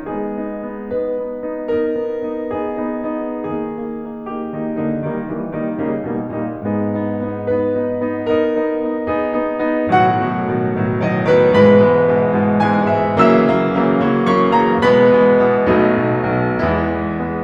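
Music, with no technical faults heard anywhere in the clip.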